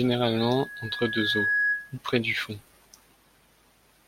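From about 0.39 s to 1.98 s, a loudspeaker feedback squeal rides over the speech, ending just before "près du fond". The microphone is picking up its own loudspeaker, and at 1.7 kHz the loop gain tops unity, so that tone feeds itself. It swells over roughly a second to a few decibels above the speech. A spectrogram shows one bright horizontal line at 1.7 kHz, and the waveform's envelope grows steadily before dropping away.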